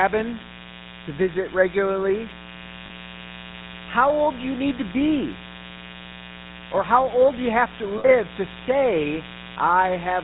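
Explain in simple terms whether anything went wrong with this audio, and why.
Mains buzz runs through the whole clip, a steady, raspy hum sitting fairly loud under the speech. Electrical interference from the 60 Hz power supply leaked into the recording, and its sharp spikes, repeating twice per power cycle, create a tight stack of overtones reaching high into the treble.

GSM full-rate codec damage is also present from start to finish. This early mobile-phone codec rebuilds the voice from a simple model of the throat, driven by evenly spaced pulses, and discards everything above 4 kHz. The speech therefore sounds muffled, buzzy and gravelly, clearly so here.

Lost GSM frames occur from 7.98 to 8.09 s. Roughly 60 ms of data went missing, which fits about three lost frames. To fill the gap, the phone repeated the last good frame, so the sound briefly hangs as a rough, metallic ring.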